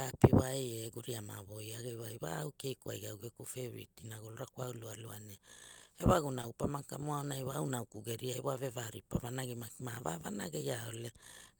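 At 6.41 to 6.45 s, short concealed packet loss. About 20 ms of audio arrived too late. The decoder patched 17 ms, leaving a brief smear.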